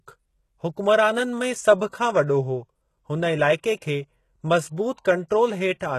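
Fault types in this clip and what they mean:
HE-AAC compression, throughout the clip: The speech carries heavy codec damage consistent with HE-AAC at a very low rate, which fits roughly 16 kbps. Only the lower spectrum is properly coded. The treble is likely rebuilt by copying lower bands upward under a coarse envelope, so harmonics stop lining up past the crossover and sibilants turn gritty and metallic. Nothing is present above 12.3 kHz.
Pre-echo, 3.76 to 3.82 s: A short hiss arrives about 58 ms ahead of a sharp attack, and the onset itself sounds softened and smeared. The transform codec spreads its quantisation noise across an entire block, so when a loud transient falls late in that block, noise sized for the loud part leaks into the quiet stretch before it, announcing the attack early.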